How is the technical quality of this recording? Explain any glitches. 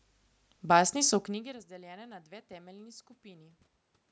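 No technical glitches can be heard; the speech sits in the band a call microphone chain passes, with nothing above 8 kHz, over room noise, and the level shift around 1 s comes from the talker moving relative to the microphone, not from the system.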